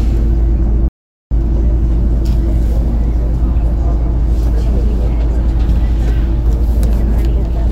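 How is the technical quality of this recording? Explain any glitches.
One glitch stands out. At 0.88 s the sound cuts to silence, and it comes back at 1.31 s. That is a playback stall lasting about 430 ms. The audio stops mid-flow and leaves a clear hole. The likely cause is the player running out of buffered data, or its playback thread being held up, so nothing reached the output until it recovered. The sound then picks up again after the gap.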